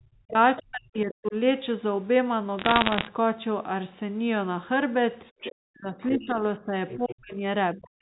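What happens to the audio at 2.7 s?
Bit errors on the digital phone line hit from 2.59 to 3.08 s, with around one bit in a hundred flipped. Each error corrupts a single sample, so sign or high-bit hits give sharp ticks and crackle over speech that stays intact, unlike packet loss, which leaves gaps.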